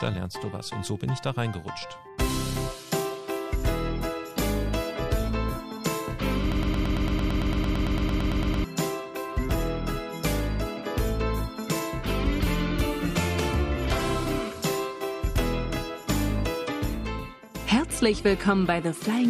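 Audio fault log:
6.52–8.64 s, broken-record loop: a 0.11 s fragment repeats exactly 19 times, back to back. A stalled player or stream is likely, and the intended audio is lost.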